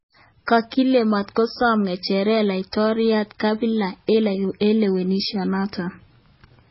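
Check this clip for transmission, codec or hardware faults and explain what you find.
Heavy MP3 compression runs through the whole speech clip and is likely the cause of its dull, watery character. Nothing remains above 5.6 kHz, which fits a very low bitrate around 16 kbps: the encoder discards treble and weak frequency lines, which flicker between frames, giving swirly textures and smeared consonant attacks.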